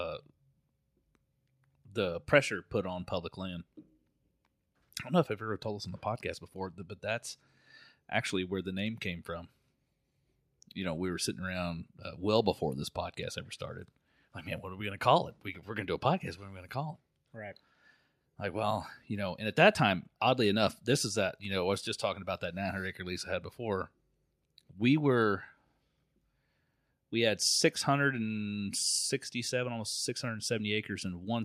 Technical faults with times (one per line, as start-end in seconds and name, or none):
none